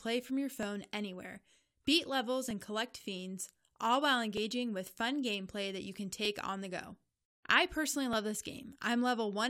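A regular click recurs every 1.88 s through the speech, about five times from 0.63 s to 8.13 s. These are clock drift buffer slips, likely from two devices whose clocks differ by roughly 500 ppm, so the buffer periodically drops or repeats a few dozen samples.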